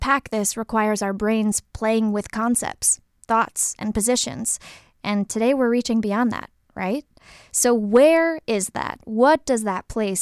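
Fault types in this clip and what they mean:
No technical fault can be heard anywhere in the speech signal.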